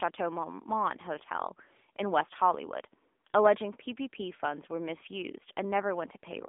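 Throughout the speech, the AMR narrowband mobile codec confines the sound to a telephone band of about 250 Hz to 3.5 kHz, with nothing above 3.6 kHz. Its pulse-driven vocal-tract model adds a plainly audible buzzy, synthetic edge, which fits a rate near 8 kbps. A plain low-pass filter would only dull the sound, without that buzz.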